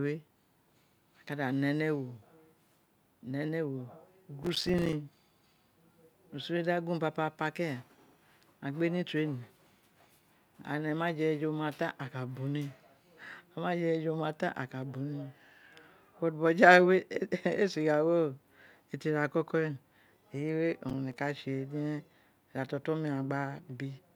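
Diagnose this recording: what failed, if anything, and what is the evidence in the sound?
Processor overload crackle from 4.43 to 4.93 s and 20.89 to 21.18 s. It's a buffer-stage problem: tiny buffers kept missing their deadlines, each dropping out to silence, so you hear gritty tearing.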